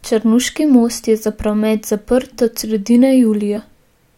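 At 3.55 to 3.58 s, damaged data in the compressed stream knocks the decoder off frame sync, giving a brief chirp, squawk, click or short hole.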